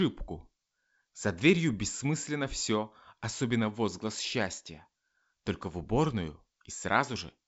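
Nothing stood out on listening to this speech, which comes across as ordinary G.722 wideband telephone audio.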